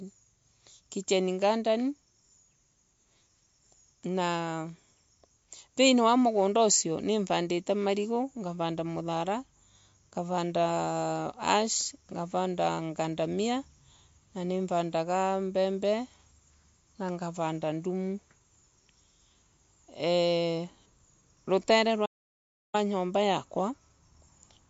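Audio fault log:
Throughout: MP3 compression. The speech sounds watery and swirly, with nothing above about 7.6 kHz, so s sounds are dull and chirpy. This is likely a low-bitrate MP3 encode, consistent with roughly 48 kbps, where the encoder drops the treble and switches weak frequency lines on and off between frames.
22.06 to 22.74 s: audio dropout to silence. The speech cuts out for about 0.68 s into silence with no room tone beneath it, then returns mid-flow. This likely reflects the input being lost while the recorder kept writing silence, so that stretch of speech is gone.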